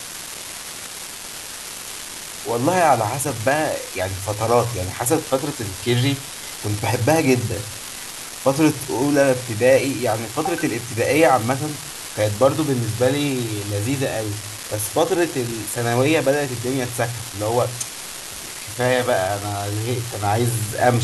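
From start to finish, an unreliable data bit adds a steady crackle under the speech. One marginal line flips randomly, each error a step of about -15 dBFS, audible even in pauses.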